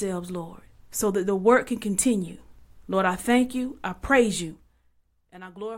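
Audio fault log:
4.46–4.95 s zipper noise: the gain falls about 15 dB in unsmoothed 1 dB steps, around 50 per second, so each jump clicks, producing a zipping rasp over the speech.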